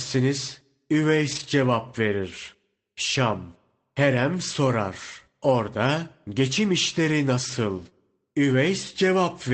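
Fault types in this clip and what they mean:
Lost packet rebuilt from error correction: rougher, noisier stretches without any gap, near 1.3, 4.33, 5.65 and 7.8 s, where the decoder played low-bitrate copies of lost packets.
Short concealed packet loss: a brief smear at 7.9 s, where about 20 ms arrived too late and the decoder extended the preceding sound before blending back.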